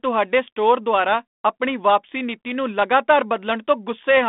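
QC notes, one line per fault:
No faults heard in this speech clip.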